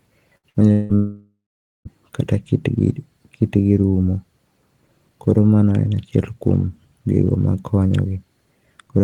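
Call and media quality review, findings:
Burst of packet loss, 0.37–0.46 s and 0.49–0.57 s. Jitter buffer/receiver concealment extends the last speech for 57 ms and 50 ms, fading. Resumes each time with about 60 ms of speech skipped.

Long network dropout, 0.72–0.92 s and 0.95–1.88 s, likely a transport-path interruption. First gap: 0.17 s of concealment fill, no silence, 0.18 s lost. Second: fading fill, then about 0.46 s of silence. Roughly 0.9 s of speech is gone.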